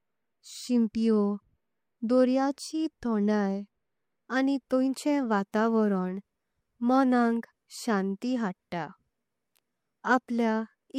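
Pre-echo at 4.70 s and again at 5.52 s, just after "आनी तेंचे", in this speech clip. Each sharp attack falls late in a transform block of roughly 26 ms, and the codec spreads quantisation noise sized for the loud onset across the whole block. A short hiss, about 15 dB and about 14 dB above the surrounding quiet, leaks in 10 ms and 17 ms ahead of the attacks, softening them. That suggests the coder never switched to short blocks.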